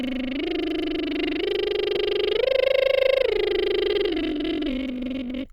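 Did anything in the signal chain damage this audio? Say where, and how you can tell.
Yes. From 3.89 s to the end at 5.53 s, the music abruptly runs about 1.82 times faster while its pitch stays put. It sounds rushed. This time-stretched section was likely made by editing software that dropped short pieces to fit a length.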